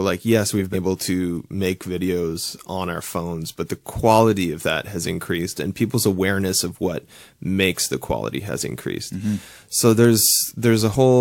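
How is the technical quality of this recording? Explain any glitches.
One glitch stands out in the speech. At 0.72 to 0.75 s, just after "yes we've", the audio lurches forward: compressed frames skipped. Roughly 150 ms of sound is missing, which fits about three dropped codec frames of around 46 ms each.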